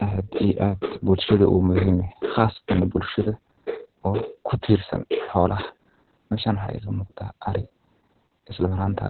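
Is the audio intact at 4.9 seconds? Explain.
No. At 4.9 seconds, as throughout the speech, Opus voice compression is audible. The coder runs in narrowband SILK mode, so nothing is present above 4.3 kHz. The excitation is coarsely coded, which suggests a bitrate near 6 kbps. The speech sounds muffled, hoarse and slightly robotic.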